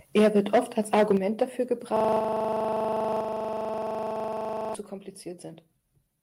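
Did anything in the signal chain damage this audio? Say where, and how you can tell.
Yes, four kinds of damage can be heard.

Microphone overload at the converter: from 0.16 to 1.15 s the loudest syllables have a harsh, crackling edge. Peaks are driven about 8 dB past full scale, with roughly a tenth of the samples flattened. A milder burst at 1.41 to 1.43 s goes about 2 dB over, clipping a smaller share. The likely cause is a microphone input gain set too high, so the converter cuts off the tops of the waveform.

Microphone volume stepped down, in call processing: the level of both the voice and the background drops suddenly at 0.18 s (about 2 dB), 1.17 s (about 6 dB), 2.19 s (about 4 dB) and 3.21 s (about 4 dB). The second step comes just after the clipped stretch. The pattern points to the call software's automatic gain control, which likely saw clipping and lowered the device's input volume one step at a time.

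System hang loop at the driver or buffer stage: from 1.97 to 4.75 s the audio gets stuck in a loop. One 40 ms piece repeats exactly, 68 times, at a steady 25 Hz rate. This is what happens when the computer or driver freezes while the sound hardware keeps replaying the same ring buffer. A 40 ms loop fits a buffer of about that length.

Jitter buffer slow-down at the network receiver: between 5.24 and 5.79 s the sound stretches to about 93% speed without any change in pitch, drawn out. About 44 ms of audio is added in that span. The receiver was repeating single pitch periods to rebuild its reserve after the buffer ran low or its target delay was raised.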